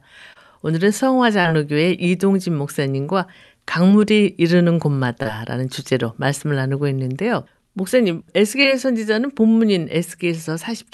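Short concealed packet loss hits at 0.33–0.37, 1.41–1.47, 5.23–5.27 and 8.63–8.66 s. Each time a slice of the call arrived too late, and the receiver papered over it by stretching the last bit of sound, so you get a quick smear or wobble.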